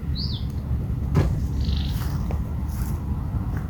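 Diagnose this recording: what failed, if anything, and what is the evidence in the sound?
Nothing failed here that I can hear: the audio holds steady the whole way, with no sign of trouble at any stage from the wiring to playback.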